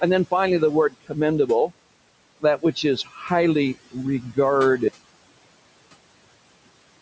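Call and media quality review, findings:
Noise suppressor artifacts, whole clip. Suppressor attenuating bands it classifies as steady noise by about 21 dB, frame by frame. Room noise, about 18 dB under the speech, drops away in pauses and rises under speech.

Speech cut by the noise suppressor, 0.90–1.17 s, directly after "then finally the". Suppressor misclassifying speech energy as noise; roughly 150 ms pulled down, deepest about 21 dB. Speech swallowed, faint.

Speech cut by the noise suppressor, 3.04–3.30 s. Same gain stage misreading speech as background; about 200 ms attenuated, deepest about 12 dB. Speech swallowed, faint.

Audio dropout to silence, 4.88 s to end of clip. Likely input loss, such as a device disconnect, link failure or stray mute, with the encoder continuing to write silence. Sound cuts off mid-flow into silence, no room tone, remainder lost.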